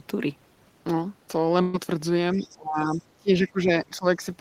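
At 1.61 s the speech is briefly replaced by a concealment fill lasting about 120 ms, to 1.76 s. The last sound is stretched and faded into a held, dwindling tail before the speech jumps ahead, with roughly 120 ms of material gone. This is a burst of packet loss: consecutive packets failed to arrive in time, so the receiver extended and attenuated what it had, then resumed from later audio.

From 2.34 to 2.54 s, and again from 2.86 to 3.03 s, a faint second voice sits underneath, about 30 dB below the talker. This is the other side's voice leaking through, likely residual loudspeaker echo that the echo canceller failed to fully remove from the microphone signal.

Overlapping this, the talker's own speech sinks in three stretches: 2.34 to 3.00 s with the deepest dip around 25 dB, 3.17 to 3.70 s at around 20 dB, and 3.86 to 4.26 s at around 15 dB. Together the affected stretches amount to well over a second. 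This is speech suppressed in double talk, likely the echo canceller mistaking simultaneous talk from both ends for echo and clamping down on the near talker along with it.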